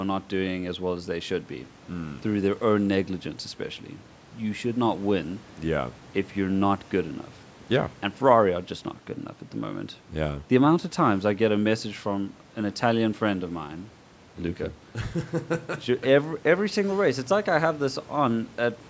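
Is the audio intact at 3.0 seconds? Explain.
Yes, the speech at 3.0 seconds is intact, with nothing broken or disturbed at that moment beyond the ordinary band limit of a call microphone path, which leaves no content above 8 kHz.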